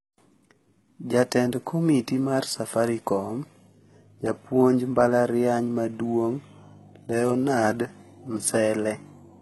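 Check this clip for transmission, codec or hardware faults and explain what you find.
One codec fault runs through the whole speech clip. Throughout, heavy damage from likely HE-AAC compression: the treble is rebuilt by copying lower bands upward, so harmonics misalign and s sounds turn gritty, metallic or lispy, with nothing above 11.8 kHz. The damage fits a very low bitrate, around 16 kbps. Unlike a plain low-pass cut, the treble is present, but it is synthetic rather than missing.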